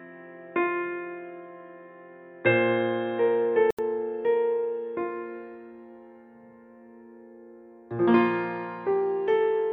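From the start to about 3.79 s the music sounds dull and boxy, with nothing above about 3.8 kHz, a faint extra noise floor sitting well below the music, and a level a few decibels off from what follows. At 3.79 s a brief gap of about 80 ms opens, and the sound then comes back brighter and fuller. The likely cause is the input switched to a poorer device, a narrower-band device in use until the system changed back.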